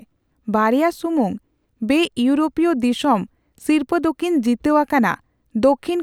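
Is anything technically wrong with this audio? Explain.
No, nothing technically wrong turns up here; it's just a stretch of speech with no faults to point to.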